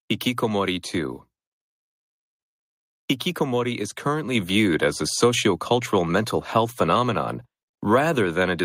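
At 4.35 s, just before "viewed as a sociocultural", the microphone volume steps up by about 4 dB. The call software judged the input too quiet and raised the device gain in a single jump, so voice and background noise both become louder at once.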